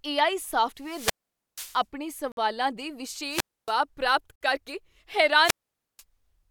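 Speech that three times swells into hiss and static, falls to near silence, then returns: at 0.80–1.83 s just after "ਏ ਆਈ" (hole about 0.48 s), at 3.29–3.74 s just before "ਪ੍ਰਾਪਤ ਕਰਕੇ" (about 0.28 s), and at 5.41–6.03 s (about 0.49 s). This is wireless microphone squelch dropout, where the FM radio signal weakens until the receiver's squelch mutes the output. Separately, hard-edged silent holes appear at 2.32 s (53 ms) and 4.36 s (52 ms), two seconds apart. These are gaps between stream segments, where mismatched timestamps at segment boundaries are filled with silence, which fits 2-second segments. No audio is lost in these gaps.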